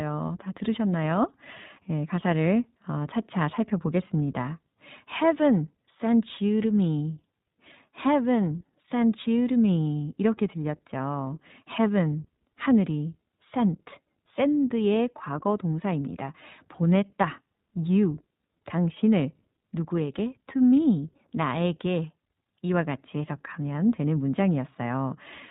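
The speech in this clip has passed through the iLBC codec for its whole length. Nothing above 4 kHz survives, so the sound is narrowband and dull at the top. The damage is plainly audible. Speech stays clear but sounds rough and slightly synthetic. Each short frame is coded on its own, without reference to the one before. The roughness fits 20 ms frames at about 15 kbps, the higher iLBC rate.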